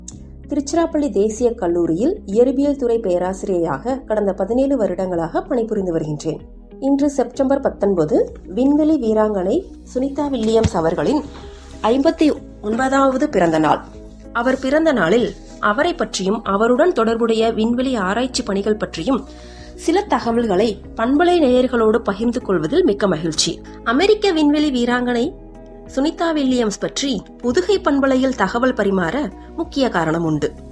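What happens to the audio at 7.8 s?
Nothing goes wrong at 7.8 s; the audio plays through that moment intact, with no dropout, click or distortion.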